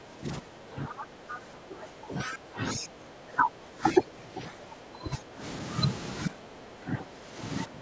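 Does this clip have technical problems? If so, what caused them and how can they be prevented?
Yes. The speech is suppressed in double talk: while both ends were talking at once, the echo canceller likely could not tell the local talker from the loudspeaker echo, so it turned everything down. The speech dips by up to around 15 to 20 dB, sounding pulled back and uneven from 0.0 to 5.42 s, again from 6.25 to 7.39 s, and from 7.65 s to the end. Using an echo canceller with better double-talk detection, or a headset, would prevent this.

The other side's voice is also leaking through in three brief scraps, at 0.99 to 1.04 s, 1.29 to 1.38 s and 2.32 to 2.36 s. These most likely come from loudspeaker playback that the echo canceller did not fully remove from the microphone. They sit roughly 10 to 15 dB below the talker's speech, as short, faint intrusions of a second voice. Headphones or a better-tuned echo canceller would stop the leak.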